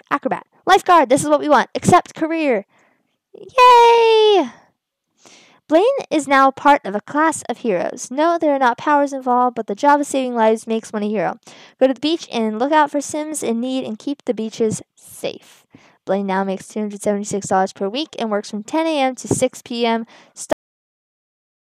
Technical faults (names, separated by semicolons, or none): cut-off end